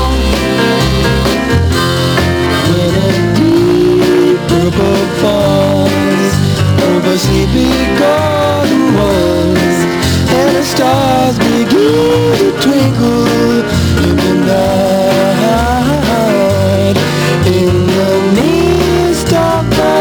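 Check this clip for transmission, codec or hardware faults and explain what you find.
There's one fault here, gain pumping, running through the whole clip. The gain swings by roughly 5 dB, pulling down under each loud sound and leaving everything squashed. The likely cause is input gain set far too high, with a fast limiter clamping down on every peak.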